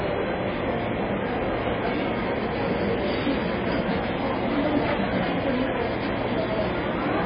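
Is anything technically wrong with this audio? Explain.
Yes. MP3 compression runs through the whole clip and has likely squeezed the audio into very few bits, consistent with a bitrate around 16 kbps. Starved of data, the encoder discarded everything above 5 kHz, leaving the sound dull and closed-in, and dropped weak frequency components that flicker in and out between frames. That flickering gives the audio a heavy watery, swirling texture with metallic chirps on bright or noisy parts, and sharp onsets come out smeared.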